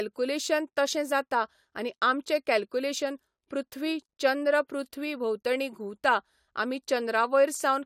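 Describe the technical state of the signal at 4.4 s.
At 4.4 s the speech signal is intact, with no dropout, clipping, distortion or other technical fault at that moment.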